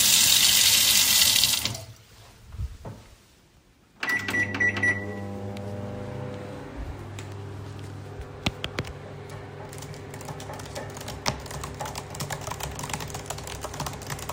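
No technical faults are audible.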